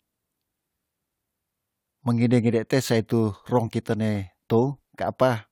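At 0.72 s there's a repeated buffer: fresh audio didn't show up in time, so the device played the last 5 ms chunk once more. Being that short, it's less a stutter than a quick click in the speech, and about 5 ms of audio is lost in its place.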